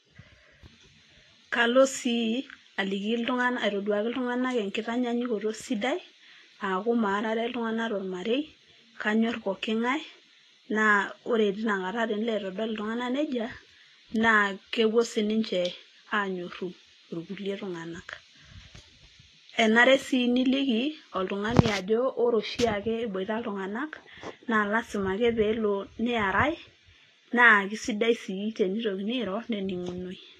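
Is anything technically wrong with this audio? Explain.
Yes. Throughout the speech there is nothing above about 14.2 kHz, and the coding artefacts of a heavily compressed source are present, despite the file being a high-bitrate MP3. This is low-bitrate audio saved at a high bitrate, likely a roughly 28 kbit/s Vorbis encode re-encoded at 320 kbit/s. The second pass faithfully preserved losses it could not undo. A genuinely low-bitrate MP3 would be small; here the bitrate is high and the damage is inherited.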